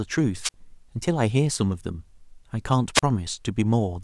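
Two wireless microphone squelch dropouts break up this speech recording, at 0.41 to 0.54 s and again at 2.94 to 3.03 s. In each, the radio link from the analogue FM transmitter fades, the receiver's squelch gate closes, and the output mutes, for about 53 ms in the first event and about 36 ms in the second. Each hole is preceded by a short burst of hiss as the signal weakens, then the speech resumes.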